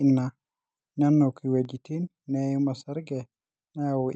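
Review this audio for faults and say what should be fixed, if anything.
A digital gain change, most likely a level setting or bit shift applied in one step with no ramp, cuts the level at 1.65 s and holds it there until the end of the clip. This is a sudden gain jump: the speech and the background noise both drop by about 5 dB from one sample to the next, so the floor visibly steps down along with the voice, and the step itself can leave a faint click. To prevent it, apply gain changes through a short ramp of a few milliseconds rather than switching them instantly.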